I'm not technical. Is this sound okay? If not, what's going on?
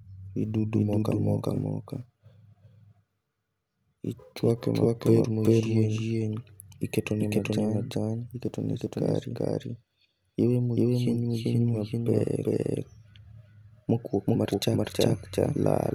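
No. This has a doubled audio track: the recording has most likely been captured twice, once through a slower route, and both copies were mixed together. Throughout the speech, a second copy trails the first by a bit under half a second, at roughly the same loudness. It doesn't sound like a room echo; it's a clean, identical repeat, so every syllable is heard twice.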